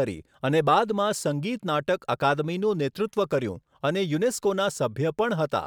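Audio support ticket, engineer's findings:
Sample clock jitter from 3.89 s to end of clip. Hiss and roughness riding on the speech, strongest on loud and bright sounds, absent in pauses. Probable component: converter clock, timing wander on the order of a microsecond. Error roughly 40 dB below signal, rising with waveform slope.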